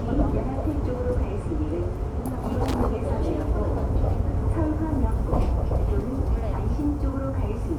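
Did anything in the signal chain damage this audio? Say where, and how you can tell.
Yes, in the analogue wiring: a loose connector crackle from 2.66 to 2.74 s, a short irregular scratchy burst where a worn contact chopped the signal on and off.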